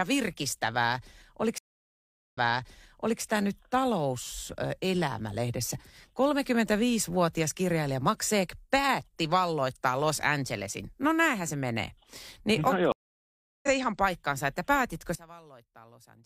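Stream reconnects occur at 1.58 s and again at 12.92 s. Each time the connection dropped, playback went silent, and a new decoder picked up the stream partway through. The first gap runs from 1.58 to 3.22 s, with about 0.75 s of silence. The sound then resumes roughly 0.88 s earlier, so a stretch is heard twice as the server resends buffered audio. The second, from 12.92 to 13.68 s, goes silent for 0.71 s and comes back about half a second later, so that portion is skipped.

One channel is inverted from 15.15 s to the end. The level falls by about 24 dB, and the centred speech nearly disappears, leaving a faint residue. That is what happens when a reversed-polarity channel is summed to mono: everything common to left and right cancels, and only the small difference between them survives. The likely cause is a polarity flip on one stereo channel ahead of a mono fold-down.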